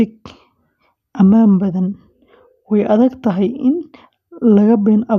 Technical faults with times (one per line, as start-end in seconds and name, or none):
none